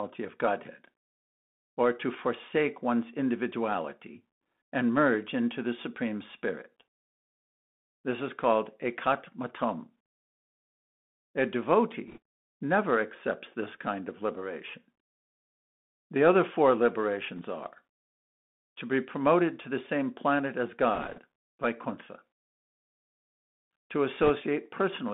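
The whole clip runs through a Bluetooth CVSD headset codec, and the damage is plainly audible. The band is squeezed to roughly 200 Hz to 3.6 kHz, s sounds come out scratchy, and a grainy hiss sits under the speech. That fits a one-bit, 64 kbps stream whose step size can't keep up.

On top of that come four short bursts of bit errors on a Bluetooth voice link:

at 12.08 to 12.18 s, just before "never accepts this kind";
at 17.36 to 17.40 s;
at 20.94 to 21.20 s, right after "the same planet as";
at 24.23 to 24.30 s.

Flipped bits at a rate of a couple of percent give a quick rushing crackle rather than hard clicks, since each bit only nudges the level slightly.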